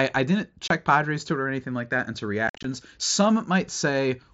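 Speech carried over a wideband mSBC headset link shows unconcealed Bluetooth headset packet loss. The first hole falls at 0.68 to 0.70 s. It is a brief dropout of about 22.5 ms with abrupt edges. The second is worse, spread across 2.48 to 2.65 s. About 120 ms of audio vanishes in scattered pieces, the longest gap 52.5 ms. That sounds chopped and crackly. Lost radio packets were replaced by silence or an idle pattern, not concealed.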